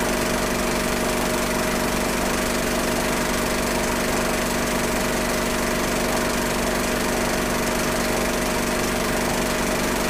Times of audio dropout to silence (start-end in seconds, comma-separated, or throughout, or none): none